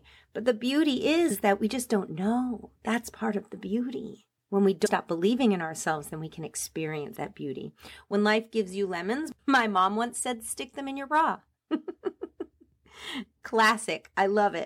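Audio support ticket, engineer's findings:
Compressed frames skipped, three times. At 1.30 s, between "the beauty" and "is that we just", about 70 ms of audio is lost. At 4.85 s, just before "stop believing in ourselves", the gap grows to about 200 ms. At 7.15 s, just before "that beauty", it is about 70 ms again. The decoder is dropping missing or damaged frames, and the jump sizes fit a frame of about 26 ms. Overlapping frames smear each join into a soft blip, not a click. On the spectrogram, each shows as a sudden discontinuity in the formants. On the waveform, the envelope joins abruptly without a step.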